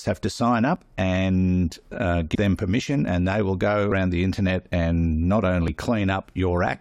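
Four breaks interrupt this speech clip, each with a small jump forward in the sound and no gap of silence: at 0.76 s, between "have to sign" and "and uh"; at 3.08 s; at 3.92 s, between "they will go" and "the internet and not"; and at 5.68 s. These are dropped buffers (overruns), likely because the recording program did not collect its samples before the hardware overwrote them. Each stretch is lost and its edges are joined directly. Roughly 40 ms disappears at most of them, and closer to 70 ms at 3.92 s. At 2.34 s, between "and uh" and "them permission", a brief fault is damaged data in a compressed stream: corrupted bytes made the decoder misread a frame and lose sync before it found the next frame header and carried on.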